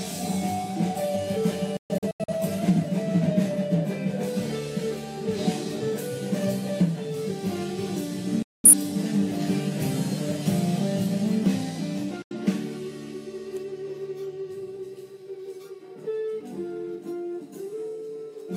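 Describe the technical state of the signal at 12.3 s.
At 12.3 s the signal is in a digital broadcast dropout, from 12.22 to 12.35 s. The receiver lost valid frames, consistent with two, and muted with a fade of about 3 ms. The sound cuts abruptly to silence, shown as a flat waveform gap and a blank vertical band across the spectrogram.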